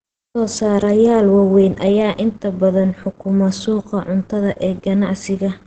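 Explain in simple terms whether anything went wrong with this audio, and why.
Throughout, the speech sounds muffled and hoarse, with nothing above 8.6 kHz. That is likely Opus compression in speech mode, which roughens the sound rather than making it swirl like MP3.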